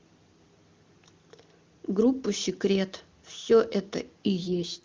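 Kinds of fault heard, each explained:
AMR rate drop: At 4.43 s the speech turns rough and raspy, and stays so until the clip ends. The band does not narrow and nothing drops out. Before that the wideband HD Voice coding sounds clear, which fits a high AMR-WB rate such as 23.85 kbit/s. The harsh, synthetic texture points to a switch down to about 6.6 kbit/s. A weak radio link forces this. The network trades speech bits for error protection.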